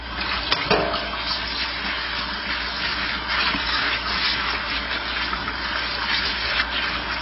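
Throughout, the audio is dull, smeared and fizzy, with nothing above 5.6 kHz. The likely cause is heavy AAC compression at a bitrate near 16 kbps, which discards high bands and starves the rest. A spectrogram shows a flat ceiling at 5.6 kHz.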